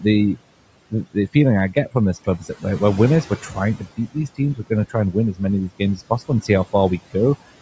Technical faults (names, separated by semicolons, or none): overdone noise removal; noise suppressor artifacts; speech cut by the noise suppressor